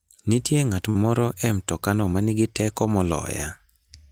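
At 0.89 to 0.97 s, a short stall from a late packet. The buffer ran dry, so about 56 ms of speech is held and stretched, with a slight buzz or dip.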